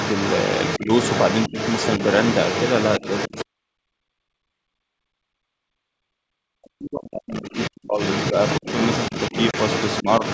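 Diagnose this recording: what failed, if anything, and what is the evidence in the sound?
Call processing, echo canceller: the residual echo path likely failed to cancel the far end's loudspeaker signal, so the other side's voice leaking through is heard from 0 to 3.44 s and again from 7.35 s to the end, sitting only about 5 dB below the near talker.

Call processing, double-talk handling: the canceller could not tell its own talker from the echo while both spoke, and likely ducked everything, so speech is suppressed in double talk. Brief dips occur at 0.79–0.90 s, 1.49–1.56 s, 8.33–8.66 s and 10.02–10.22 s, and from 2.99 to 8.0 s the talker is pushed down by as much as roughly 40 dB.

Network and codec: packet loss on an ADPCM call, here G.722 at 64 kbit/s, leaves a hard-edged 30 ms hole from 9.51 to 9.57 s, which fits a few lost packets. The decoder's predictor and step size then no longer match the sender's, so speech re-enters slightly distorted before settling.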